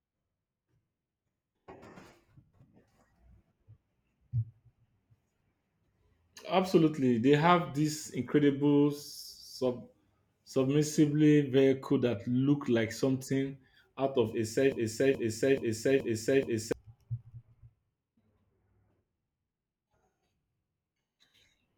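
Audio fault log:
14.72–16.72 s, broken-record loop: the speech suddenly catches on a 0.43 s fragment and plays it back to back five times, identical each pass, so you get that stuck-CD stutter for about two seconds before it carries on. Whatever should have been said in that stretch is simply gone. The likely culprit is a stall in the player, encoder or stream, which kept resending the last chunk it had in hand until data started flowing again.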